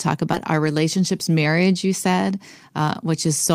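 A skip ahead at 0.33 s in this speech recording drops roughly 0.4 s of audio with no fill, splicing the two sides almost directly as backed-up playback jumps forward. A jitter buffer speed-up from 0.96 to 1.54 s trims repeated pitch-period slices, a few tens of milliseconds in all, so speech runs about 6% faster at unchanged pitch.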